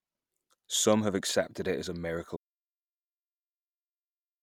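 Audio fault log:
2.37 to 4.43 s, audio dropout to silence: the speech cuts off abruptly at 2.37 s and never comes back. From there to the end is pure silence, with no room tone at all. The input was likely lost while recording carried on writing silence.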